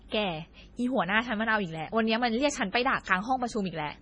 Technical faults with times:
0.00-4.01 MP3 compression

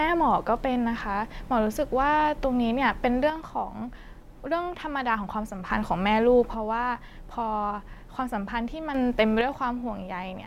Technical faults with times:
3.30-5.70 one channel drops out
6.55-8.95 one channel drops out
9.41-10.47 one channel drops out

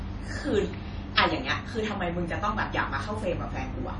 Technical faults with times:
0.00-3.99 MP3 compression

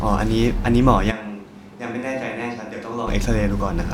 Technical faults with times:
1.12-3.06 switch to a distant microphone

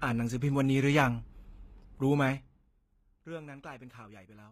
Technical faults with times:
0.00-4.52 HE-AAC compression

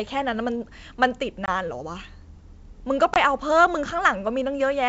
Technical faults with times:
1.46-1.49 packet loss on an ADPCM call
3.14-3.18 packet loss on an ADPCM call

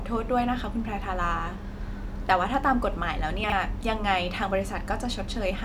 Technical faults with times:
3.44-3.52 chunks out of order

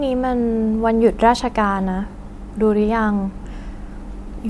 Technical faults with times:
none

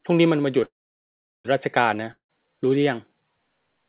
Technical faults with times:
0.64-1.46 call audio freeze
2.11-2.31 long network dropout

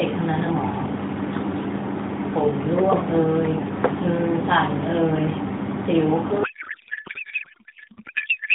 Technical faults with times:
6.44-8.55 codec payload misread

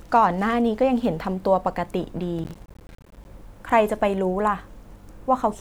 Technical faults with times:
2.39-3.25 processor overload crackle

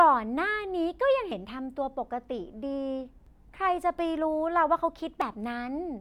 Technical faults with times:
1.31 audio missing between chunks
3.26 audio missing between chunks
5.21 audio missing between chunks

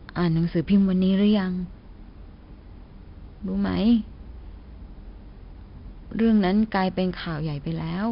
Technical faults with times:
0.00-8.12 4-bit ADPCM compression

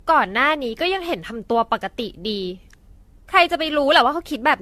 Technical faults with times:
0.00-4.62 generation loss

